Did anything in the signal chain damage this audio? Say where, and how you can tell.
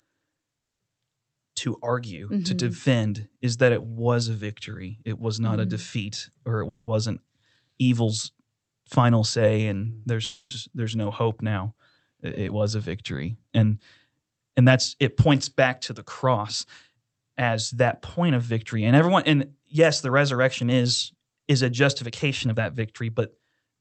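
Yes. In the network and jitter buffer, packets were likely held up, producing call audio freezes at 0.59–0.81 s (silent), 6.69–6.90 s (fading buzz) and 10.25–10.53 s; speech then resumes intact.

The jitter buffer speed-up trimmed pitch periods to shed excess delay: 14.15–17.87 s runs at 106% (about 0.2 s removed), 20.05–23.76 s at 110% (about 0.4 s). Speech sounds hurried at unchanged pitch.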